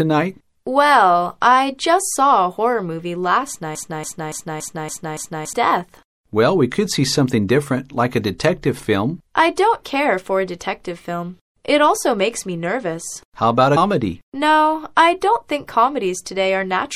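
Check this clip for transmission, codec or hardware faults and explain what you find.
Three faults are audible: low-bitrate compression across the whole clip, a stuck repeating loop, and one brief decoding glitch.

Throughout, the sound is watery and swirly, with dulled treble, metallic chirping on sharp high sounds and softened attacks. This is likely MP3 compression at a low bitrate, around 64 kbps: the encoder cuts off the top end and drops weak frequency components that flicker on and off from frame to frame.

From 3.75 s to 5.53 s, a 283 ms fragment repeats back to back six times, like a stuck needle, and the sound that should have filled that span is missing. This broken-record loop likely comes from a stalled player or stream that kept resending the last piece it held.

At 13.76 s there is a short chirp or blip. This comes from damaged data in the compressed stream: the decoder hit corrupted frames, lost sync and skipped ahead to the next valid frame header.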